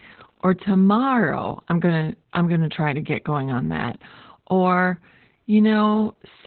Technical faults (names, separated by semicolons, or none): Opus voice compression